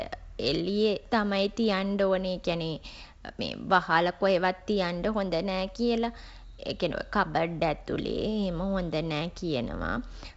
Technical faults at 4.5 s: none

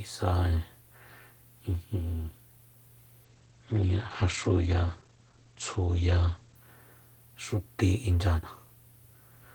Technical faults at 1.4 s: none

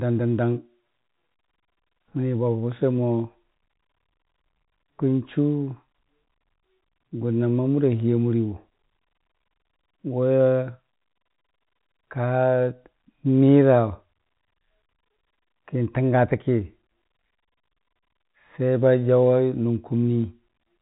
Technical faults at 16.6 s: none

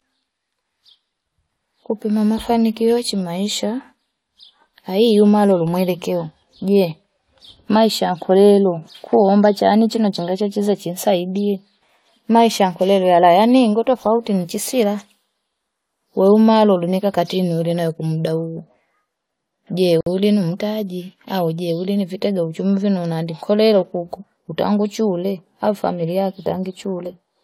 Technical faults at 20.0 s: gap at a join of encoded pieces

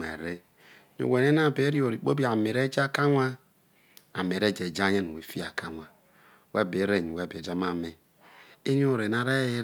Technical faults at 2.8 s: none

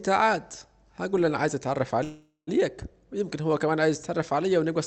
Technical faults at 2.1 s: call audio freeze

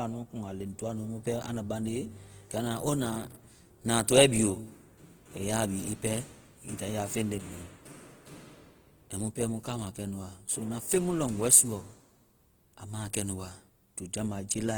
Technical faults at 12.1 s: Opus compression

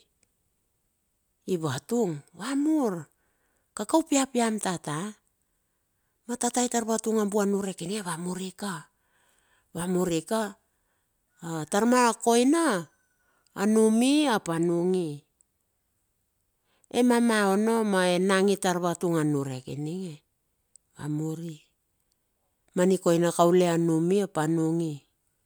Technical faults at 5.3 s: none

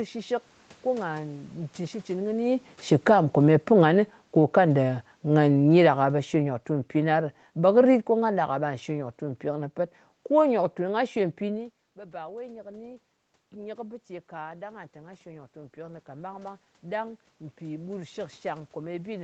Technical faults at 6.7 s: automatic gain falling

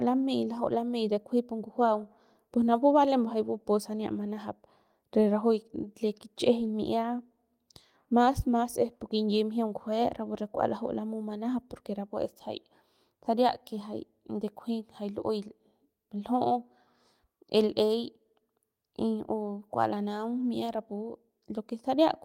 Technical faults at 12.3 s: none

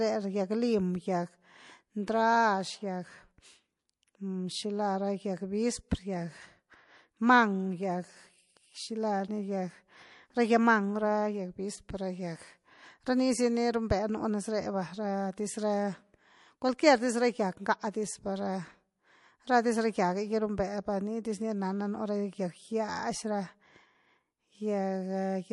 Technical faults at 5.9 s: MP3 compression; pre-echo

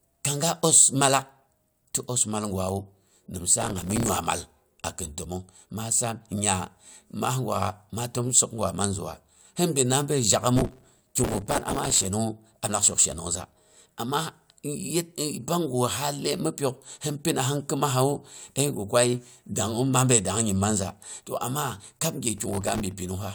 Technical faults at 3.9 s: processor overload crackle

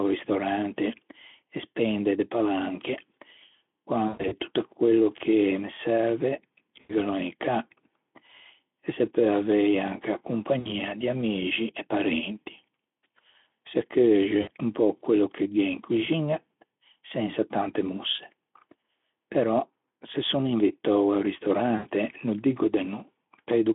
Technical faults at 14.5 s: VoIP packet loss concealed by the speech codec

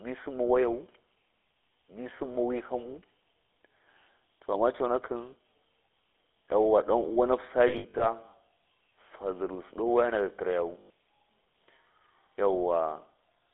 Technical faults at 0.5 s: GSM full-rate codec

